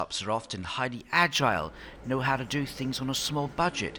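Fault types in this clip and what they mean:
Imaging from linear upsampling: straight-line interpolation to 48 kHz, fitting a 22 kHz source, dulls the top band and leaves metallic mirror images near 11 to 22 kHz, about 30 dB down.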